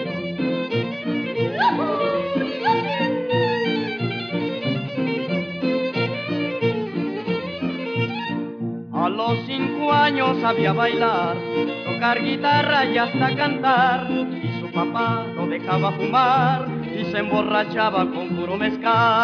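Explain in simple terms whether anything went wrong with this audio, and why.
Nothing went wrong here: the signal holds steady throughout with no audible faults.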